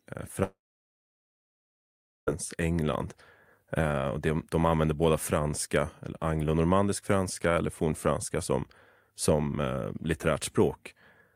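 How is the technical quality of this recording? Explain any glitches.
The recording's quality is let down by one gap near the start of the speech. Long network dropout, 0.43 to 2.29 s: the receiver likely stopped getting audio for about 1.8 s. It briefly stretched the last sound into a fading buzz or hiss, then left about 1.7 s of silence before speech resumed with that stretch missing.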